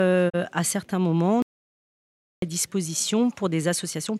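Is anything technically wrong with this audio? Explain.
Yes, there are two faults. From 0.28 to 0.36 s the sound briefly fades out over about 20 ms and drops into a short hole before returning. This is a digital broadcast dropout. The receiver muted while it had no good data, and the 32 ms gap points to a single corrupted or missing frame.

From 1.42 to 2.42 s the sound cuts out for a full second into dead digital silence with no room tone, then resumes abruptly. This is an audio dropout to silence, likely from the input link failing while the recorder kept writing silence.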